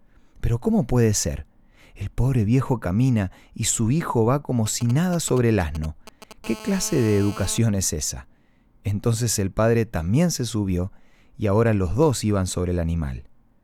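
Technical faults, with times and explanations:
4.66–6.33 s, GSM signalling bursts: Right after "su hijo va como", a galloping dit-dit-dit pattern of brief buzzes at 217 Hz sits roughly 15 dB below the speech. This points to a nearby 2G handset sending short groups of radio bursts while signalling to the network, not in a call. The audio circuitry rectifies each radio burst, so the pulses turn into short audible buzzes.
6.44–7.58 s, GSM phone buzz: A continuous hard, raspy buzz at 217 Hz, rich in harmonics, runs at about 17 dB below the speech and stops just before "es esa". The steady tone fits a handset in an active call, transmitting a burst 217 times a second. The audio circuitry rectifies the pulsed radio energy into a sharp-edged waveform, which gives the buzz its harsh, buzzy texture and strong harmonic series. The buzz has no relation to the speech.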